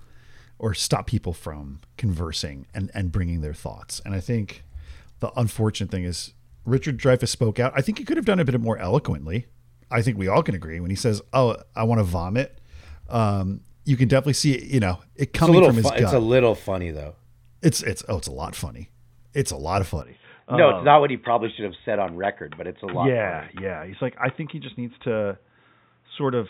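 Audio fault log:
20.02 to 26.50 s, input switched to a poorer device: the speech abruptly turns dull and boxy, with no gap at the change, and stays so to the end. The likely cause is the recording moving to a narrower-band microphone or headset profile. On a spectrogram, energy above 3.8 kHz vanishes at a clean vertical edge, and a new noise floor appears roughly 45 dB under the speech. The waveform drops by about 5 dB there.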